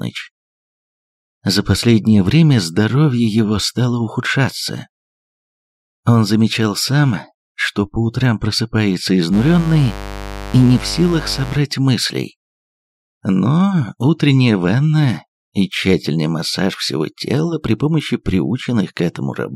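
Mains buzz from 9.31 to 11.60 s: spikes twice per 50 Hz cycle spread harmonics into kilohertz, a steady, raspy buzz roughly 10 dB below the sound.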